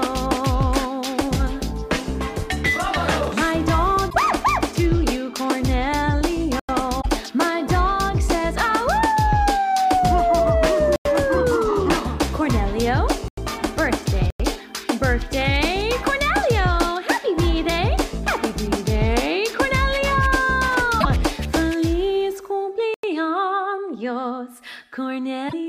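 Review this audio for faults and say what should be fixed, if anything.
Damaged data in a compressed stream appears at 4.06–4.15 s, 6.98–7.06 s, 20.97–21.05 s and 25.45–25.53 s. Each event is a short disturbance about 80 ms long. At these points the decoder hit corrupted or missing bytes, misread the frames, lost sync and jumped forward to the next valid frame header. The fix is to carry the stream over a transport with checksums or error correction and to re-fetch any frame that fails its check.

Blocks of digital silence occur at 6.60–6.69 s, 10.96–11.05 s, 13.28–13.38 s, 14.30–14.40 s and 22.94–23.03 s. Each is a hole about 93 ms long, where the sound cuts out abruptly with no fade and returns the same way. The identical length every time points to one whole output buffer going unfilled, which fits a 4096-sample buffer. To prevent it, give the audio thread enough priority and buffer headroom that it always fills each block before the output device needs it.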